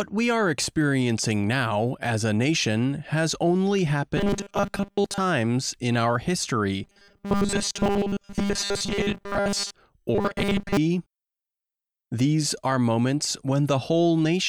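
A rigid, metallic buzz at 200 Hz is heard from 4.17 to 5.18 s, 6.84 to 9.74 s and 10.15 to 10.77 s. This is robotic sound from repeated short buffers, likely caused by a 5 ms chunk being replayed in place of most of the real audio.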